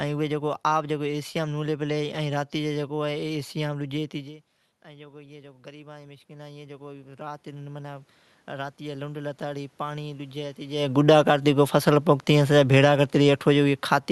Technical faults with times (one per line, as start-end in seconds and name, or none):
4.83-11.54 automatic gain rising
12.31-14.11 automatic gain falling